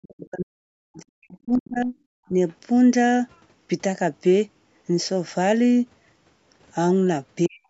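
Speech suppressed in double talk affects this speech recording from 0.00 to 1.94 s, again from 2.29 to 2.38 s, and from 7.47 to 7.63 s. The first and last stretches drop by something like 40 dB, almost to silence, while the middle one is only a slight dip. The likely cause is an echo canceller that could not tell the local talker from loudspeaker echo while both sides spoke, and so turned everything down. The other side's voice leaking through appears briefly from 2.49 to 2.54 s as a very faint scrap far beneath the speech, likely residual loudspeaker echo that the canceller failed to remove from the microphone signal.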